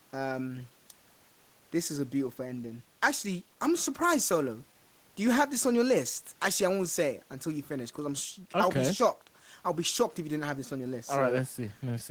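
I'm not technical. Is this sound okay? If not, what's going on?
Yes, this sound is okay, and nothing is going on with it that needs attention.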